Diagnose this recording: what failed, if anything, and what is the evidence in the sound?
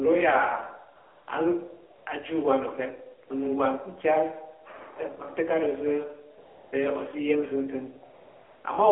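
The codec stage failed through the AMR narrowband mobile codec, across the whole clip. The speech is confined to roughly 300 Hz to 3.4 kHz and sounds buzzy and synthetic, which fits the 7.4 kbps mode. A plain low-pass filter would muffle the audio without adding that vocoder buzz.

AMR comfort noise, a call-processing fault, appears from 0.96 to 1.28 s, 6.38 to 6.72 s and 8.14 to 8.64 s. Speech frames stopped, and the receiver filled each gap with smooth synthetic noise that switches in and out. A dropout would go silent instead of hissing.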